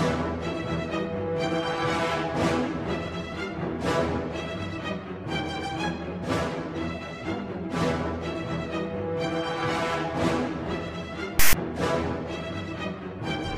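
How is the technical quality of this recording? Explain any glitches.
The recording has one glitch: file tags played as audio, from 11.39 to 11.54 s. A block of text tags was read as samples, giving a loud, lopsided rasp that then drops into silence from the zero padding. Unlike a plain dropout or a single click, it has hard edges, a buzzing rasp offset to one side, and abrupt silence.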